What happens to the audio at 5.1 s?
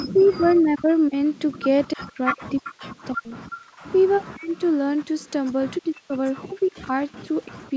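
A faint delayed copy of the speech trails the original by about 312 ms, well below it in level, from 1.86 s to 5.31 s. This is an echo leak, likely from a far-end loudspeaker whose echo canceller failed to remove the returning sound.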